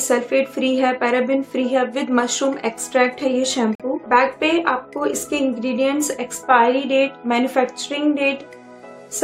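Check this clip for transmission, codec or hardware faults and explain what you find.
One codec fault is audible. Corrupt frame muted, 3.74 to 3.82 s: damaged compressed data was rejected by the decoder and replaced with silence, leaving an abrupt hole about 74 ms long, which points to roughly three lost frames, while the sound resumes on time afterwards.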